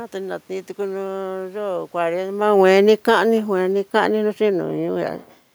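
From 1.97 s to 5.17 s the speech shows automatic gain falling: the gain control judged the input too loud or its background noise too strong and pulled its gain down gradually by about 6 dB. The voice and the room noise beneath it sink together, unlike the talker's own shift in distance around two and a half seconds, which changes only the voice. On a waveform the envelope tapers steadily across that span, and a spectrogram shows every band, noise floor included, dimming in step.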